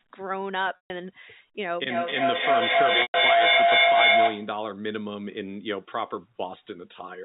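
At 0.76 s the speech hits packet loss with pitch repetition. About 140 ms of audio goes missing, which fits a run of roughly seven 20 ms packets. Instead of a clean gap, the receiver keeps replaying the last pitch period and fades it over about 50 ms. The result is a brief buzzy hold that sinks toward silence before speech cross-fades back in around 0.90 s. That held, periodic tone is what separates concealed loss from a plain dropout.

From 1.89 s to 4.6 s a feedback howl builds. Two devices in the same room are on the call, so each loudspeaker feeds the other's microphone. The loop gains on every pass, and the sound narrows toward a single tone near 700 Hz. It swells to about 10 dB above the speech and pulses roughly every third of a second, matching the loop delay. Unlike steady hum or interference, it grows and throbs rather than sitting at a fixed level. It lasts until the loop is broken.

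Inside the howl, at 3.02 s, a second packet loss with pitch repetition bridges about 120 ms, roughly six packets, with the same buzzy held period. It ends at 3.14 s.

Throughout, the G.711 telephone coding keeps everything below 4 kHz.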